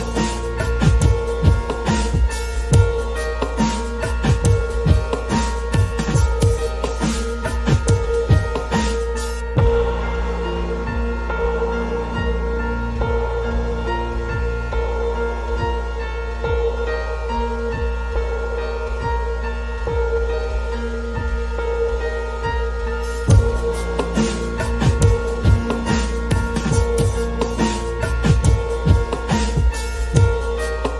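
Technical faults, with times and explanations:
No technical faults can be heard at any time in the clip.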